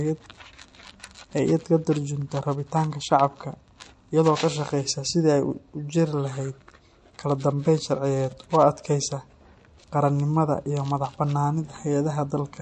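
Across the whole recording, the speech has likely been squeezed through MP3 compression at a low rate; the damage is plainly audible and fits a bitrate near 48 kbps. Starved of bits, the encoder has dropped quieter frequency lines that blink in and out between frames. The result is a watery, swirling texture and softened, smeared onsets.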